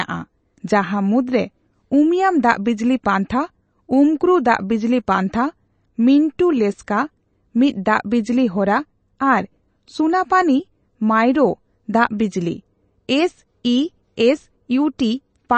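Throughout the speech, nothing is heard above 8.3 kHz. The treble stops at a hard ceiling. Weak detail flickers in and out, giving a watery, swirly texture. The damage is plainly audible. This is likely MP3 compression, at a rate that fits about 32 kbps.

At 14.98 s there is pre-echo. A short hiss arrives about 10 ms before a sharp attack. The codec spread its coding noise across the whole block. So the quiet moment before the onset fills with noise, and the attack sounds softened.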